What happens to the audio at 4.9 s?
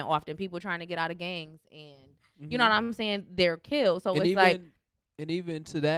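Nothing goes wrong at 4.9 s; the speech carries on intact through that moment.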